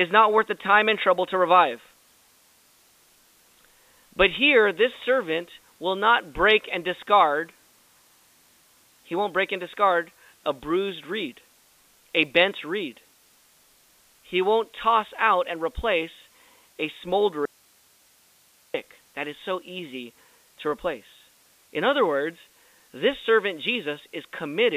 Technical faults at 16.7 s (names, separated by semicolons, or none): none